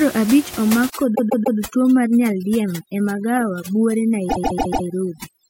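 Overdone noise removal sets in at 0.90 s, right after "abich omak", and lasts to the end of this speech clip. The room noise, about 14 dB below the speech, was suppressed far too aggressively. Any frequency band close to the estimated noise level is pushed down or removed outright, and the quieter parts of the speech are lost along with it. The background drops and breaks up into twinkling specks.

Repeated frames cause two stutters. From 1.14 to 1.57 s, a 144 ms block plays three extra times and adds 432 ms. From 4.29 to 4.86 s, the same-length block plays four extra times and adds 576 ms. The 144 ms length fits a run of about six compressed frames that were sent or written more than once, so the decoder replays the same slice. The clip ends up longer by the repeated time.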